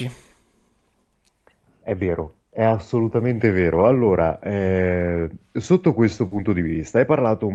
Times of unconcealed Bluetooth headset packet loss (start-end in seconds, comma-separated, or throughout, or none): none